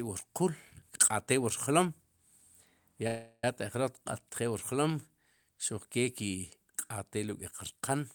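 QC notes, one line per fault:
3.07–3.44 s, call audio freeze: 0.36 s fill of fading buzz or hiss ending in 60 ms silence before "taq jroq", likely jitter-buffer underrun; spectrogram shows smeared band, then gap.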